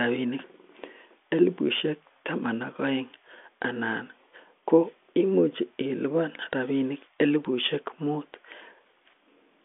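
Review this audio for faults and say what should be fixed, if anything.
Nothing stood out on listening to this speech, so there is nothing here that calls for a fix.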